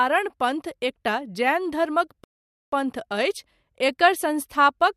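At 2.24 s the speech halts mid-flow and falls to silence until 2.73 s, a rebuffering stall. The player exhausted its downloaded audio and waited for more, adding about 0.49 s to the running time. What separates it from a dropout is the resumption: the speech picks up at exactly the point where it stopped, with nothing skipped, so the gap is a pause inserted into the sound rather than a missing piece of it.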